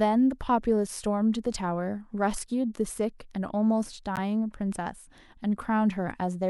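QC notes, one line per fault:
4.16–4.18 s, damaged data in a compressed stream: a short glitch in the speech, about 28 ms long. Some bytes in the compressed stream are corrupt, so the decoder misreads those frames, loses sync and hunts for the next valid frame header before decoding resumes. On a spectrogram it shows as a brief disturbance cutting across the speech harmonics. The waveform has a burst or jagged discontinuity where the signal is disrupted.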